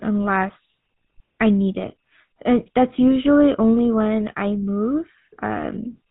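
Buzzy, gravelly speech with nothing above 4 kHz throughout, the mark of the GSM full-rate codec, which fits 13 kbps, rebuilding speech from a sparse pulse excitation.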